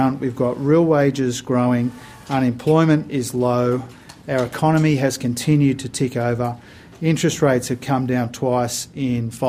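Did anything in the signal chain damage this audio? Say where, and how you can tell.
No, nothing in the signal chain can be heard damaging this audio, and no stage from capture to playback leaves an audible mark on it.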